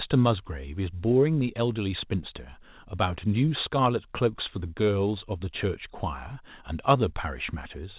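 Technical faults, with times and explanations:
No faults: the speech passes through a normally working WebRTC call path, with nothing above 4 kHz, which fits narrowband G.711 mu-law coding at 64 kbps.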